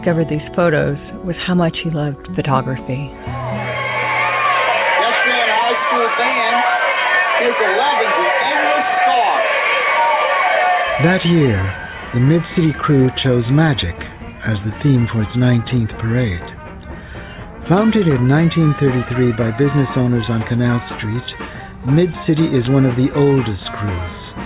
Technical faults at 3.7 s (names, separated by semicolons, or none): none